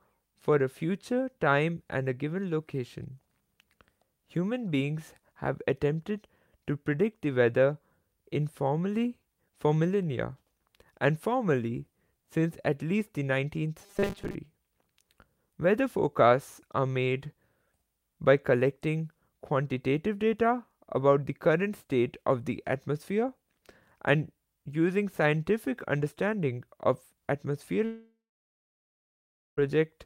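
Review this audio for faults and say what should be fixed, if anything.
From 13.82 to 14.35 s the speech turns into a stiff, metallic buzz pitched at 200 Hz that still roughly tracks the words. This is robotic sound from repeated short buffers, likely because new audio arrived too late and the player kept looping the last 5 ms chunk. That fixed 200 Hz pitch is one over 5 ms, and about half of the stretch is filler in place of real audio. To prevent it, enlarge the jitter buffer so playback never runs dry.

At 27.85 s the audio breaks into a fading continuation of the last sound, then drops to silence for 1.42 s, and speech returns at 29.59 s with 1.72 s of the original permanently gone. This is a long network dropout, likely a stall in delivery during which the receiver could only extend the last sound briefly before giving up. Nothing from the missing span is ever played back. To prevent it, stabilise the network link or add retransmission and redundancy.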